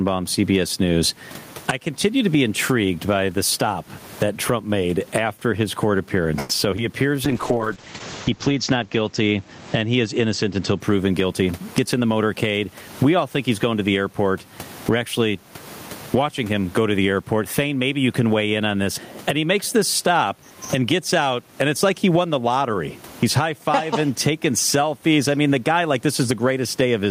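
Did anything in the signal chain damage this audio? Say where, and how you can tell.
Yes. Input gain was set far too high, and a fast limiter likely clamps every loud sound, so the level swings by around 20 dB throughout.

A network delay likely emptied the jitter buffer at 6.39 to 6.51 s, just after "made after his court", so the last sound is stretched into a fading continuation, inserting a gap.

Short concealed packet loss hits at 6.71 s and 6.76 s. About 20 ms each was lost and patched by extrapolation, heard as brief smears.

A call bitrate drop from 32 to 8 kbps between 7.26 and 10.86 s cuts bandwidth from 20 kHz to 8 kHz, leaving the sound muffled and rough.

A jitter buffer speed-up from 11.24 to 12.35 s trims pitch periods to shed roughly a tenth of a second, so the audio runs 10% fast at unchanged pitch.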